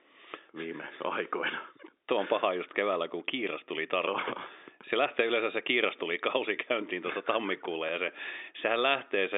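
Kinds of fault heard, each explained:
No kind of fault is heard in this speech clip, which carries the narrow band of an ordinary telephone line.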